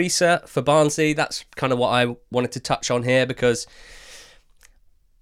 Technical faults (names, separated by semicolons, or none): none